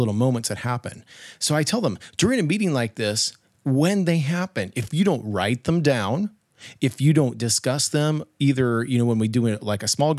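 No technical faults can be heard anywhere in the recording. The speech runs continuously, with nothing in the signal that calls for comment.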